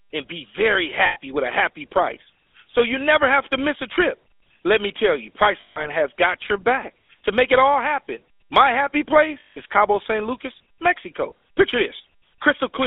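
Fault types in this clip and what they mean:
GSM full-rate codec: The speech has passed through the first-generation GSM coder, which models the vocal tract and excites it with a regular pulse train built from only every third excitation sample. The degradation is plainly audible as a buzzy, gravelly roughness over the whole clip, consistent with a 13 kbps full-rate stream. A telephone line band of about 300 Hz to 3.5 kHz removes the lows and all the air and sibilance above.
lost GSM frames: Where frames failed to arrive, the decoder reused the parameters of the last good frame instead of leaving a gap. The concealment is heard as a rough, metallic ringing hold at 1.06 to 1.18 s, roughly 100 ms, consistent with five 20 ms frames. Longer holds of about 160 ms occur at 5.6 to 5.87 s and at 9.4 to 9.57 s, each consistent with eight frames.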